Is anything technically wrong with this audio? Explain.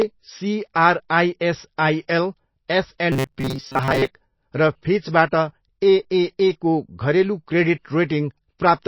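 Yes, two faults. Throughout the speech the sound is dull and watery, with swirly, plainly audible artefacts on sibilants. This is likely MP3 compression starved of bits, which fits a bitrate near 24 kbps: the encoder cuts the treble and lets weak frequency lines flicker.

From 3.12 to 4.08 s the speech turns into a rigid metallic buzz at 133 Hz that still roughly tracks the sound. The likely cause is robotic sound from repeated short buffers. Audio arrives too slowly, so a slice of about 7.5 ms is replayed to fill the gaps, covering roughly half of that stretch while real audio is skipped.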